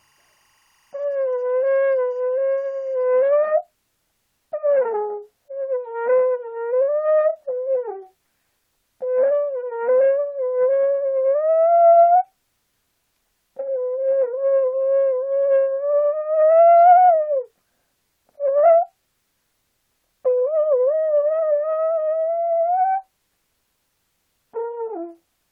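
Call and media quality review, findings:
Timecode bleed, 0.0 to 3.3 s. Faint chirping warble, well below the main audio, flipping between pitches near 1 and 2 kHz. Its rhythm fits 24 fps linear timecode. Likely cause: crosstalk from an adjacent LTC track or cable. Told apart from steady tone leakage or hum by the rapid two-pitch switching, and from a fixed whistle by that frame-locked rhythm.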